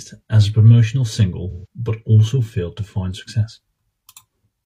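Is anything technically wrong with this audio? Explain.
Yes, there's AAC frame loss with concealment from about 1.50 to 1.66 s, right after "as a promotional" and before "but also failed to". Roughly 128 ms went missing, which fits about three lost frames. The decoder patched the gap from the last good spectrum, so you hear a short smeared, noisy, phasey blur in place of clean speech.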